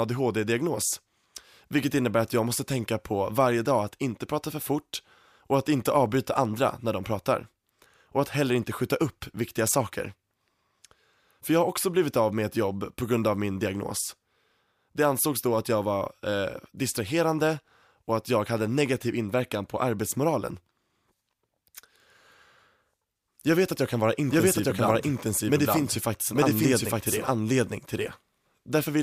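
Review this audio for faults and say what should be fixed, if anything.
A doubled audio track starts abruptly at 24.30 s and runs to the end, with a full-band copy at about equal level trailing by roughly a second. Unlike an echo, it has no decay or room colour. The likely cause is a second, slower capture path. Send each source through only one path into the mix.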